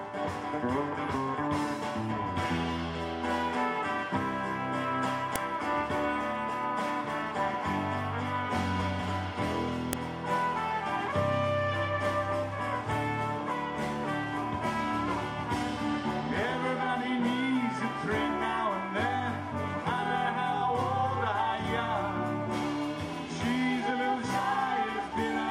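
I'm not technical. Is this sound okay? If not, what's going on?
No. The audio was assembled from separate file pieces, and the short block of setup information (the header) at the start of each piece was left in and played back as if it were sound. This is a fault called file header played as audio. Those few bytes of data come out as a sudden click or snap, heard at 5.36 and 9.93 seconds, regardless of what the sound is doing at that moment.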